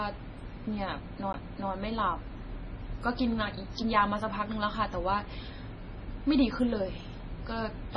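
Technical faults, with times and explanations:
Throughout, MP3 compression: the speech has a watery, swirly quality, with s sounds turning metallic and chirpy and consonant onsets smeared. There's nothing above about 10.3 kHz, so the top end is sliced off flat. That's the signature of an encoder starved of bits, and the heaviness of the damage fits a likely bitrate of around 24 kbps. The encoder had to drop the treble and zero out weaker frequency lines, which flicker on and off from frame to frame.
1.33 s, CD skip: there's a short tick and a tiny mute, roughly 15 ms, then the speech picks up from a different spot rather than continuing where it left off. A knock or a flaw made the laser jump onto another turn of the disc's spiral, so the player went quiet briefly and resumed elsewhere. That leaves a jump in the sound, forward or back by a multiple of one disc revolution.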